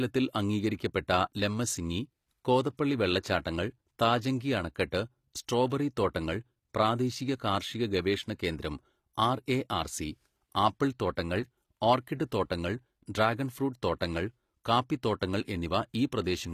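Speech, with plainly audible HE-AAC compression throughout. The treble sounds rebuilt rather than recorded. S sounds come out gritty and metallic. Nothing is present above 14.9 kHz. This is likely spectral band replication at a low bitrate, consistent with roughly 24 kbps.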